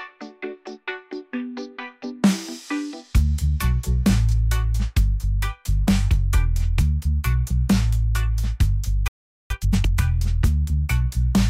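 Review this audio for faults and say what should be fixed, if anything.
A playback stall runs from 9.08 to 9.50 s: the sound cuts to silence for about 0.42 s in mid-flow, then resumes. This is likely the player running out of buffered data, or its output thread being blocked, so nothing reached the output until it recovered.

Time-compressed catch-up follows from 9.50 to 9.92 s: the sound hurries along at twice its normal rate but keeps its pitch. The player is trimming the backlog left by the stall, cutting out small pieces and cross-fading across the joins.

A deeper playback buffer and an audio thread that nothing else can block would prevent the stall, and with no backlog to clear, the hurried catch-up would not happen.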